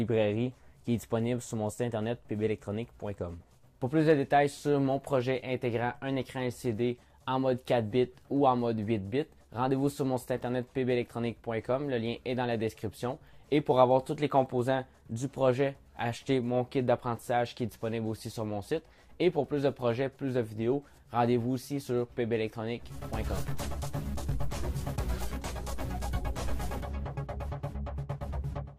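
No technical faults are audible anywhere in the recording.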